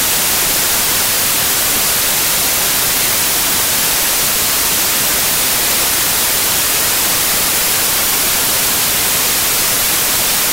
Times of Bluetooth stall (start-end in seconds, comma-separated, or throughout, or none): none